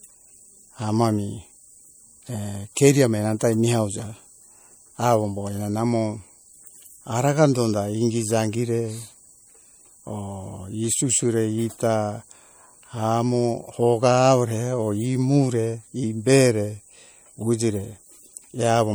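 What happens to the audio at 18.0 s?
At 18.0 s the speech still carries the damage heard throughout the clip, likely from MP3 compression at a rate that fits about 64 kbps: weak frequency lines drop in and out between frames, giving a plainly audible watery swirl, with little above 21.1 kHz.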